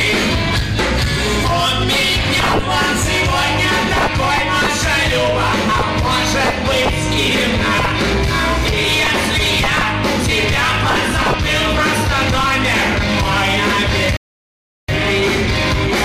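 Near the end of the clip, the sound drops to silence at 14.17 s. It stays silent until 14.88 s, about 0.72 s later. Then it picks up exactly where it broke off, with nothing skipped. This is a rebuffering stall. The player used up the audio it had downloaded and waited for more data before continuing. No audio is lost, but the pause adds about 0.72 s to the playback time.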